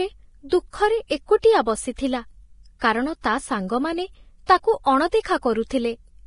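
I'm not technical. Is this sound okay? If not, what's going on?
No. Vorbis compression runs through the whole speech clip: heavy squeezing, likely from that format, removes everything above 10.5 kHz and turns fine treble detail into a grainy hiss. Pre-echo comes at 0.49–0.52, 1.07–1.10, 1.41–1.44, 2.79–2.81, 4.46–4.49 and 5.22–5.25 s. Each time, a short burst of hiss arrives just before a sharp sound, because the compression spreads its noise backwards into the quiet moment before it.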